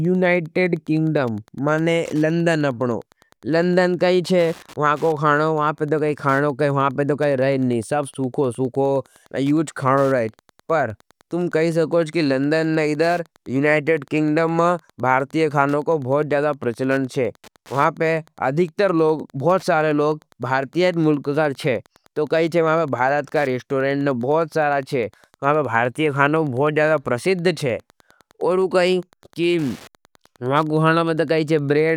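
Wi-Fi interference runs through this speech clip: a nearby radio's beacons, rectified in the audio circuit, tick every 102.4 ms, about 35 dB below the speech.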